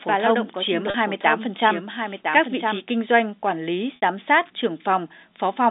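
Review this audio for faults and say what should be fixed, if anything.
A doubled audio track runs from the start of the clip until 2.84 s. A second full-band copy of the speech trails the original by roughly one second, at around 5 dB lower. It has no decay and no room colour. It is already under way when the clip begins, and it cuts off abruptly at 2.84 s. The likely cause is a second, slower capture path or an edit holding two copies out of step. Prevent it by routing only one source into the mix and checking monitoring paths for loopback.

Packet loss with pitch repetition occurs twice. The first gap runs from 0.90 to 0.94 s and lasts 40 ms. The second runs from 3.96 to 4.01 s and lasts 60 ms. In each gap the receiver repeats the last pitch period to cover the missing audio. The 40 ms gap sounds like a slightly held, buzzy note. The 60 ms gap outlasts the repetition's fade and dips toward silence before the speech cross-fades back in. 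The lengths fit two and three lost 20 ms packets. The telephone band of 250 Hz to 3.7 kHz is intact around both gaps. Prevent it by giving the link more jitter buffering or forward error correction.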